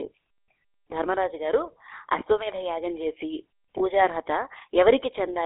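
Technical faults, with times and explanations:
Throughout: GSM full-rate codec. Speech sounds buzzy and gravelly within a 300 Hz to 3.5 kHz band. The coarse, pulse-driven vocal-tract model causes this.
3.78 to 3.83 s: lost GSM frames. A brief rough, metallic ring appears. The last good frame was repeated, which fits one missing 20 ms frame.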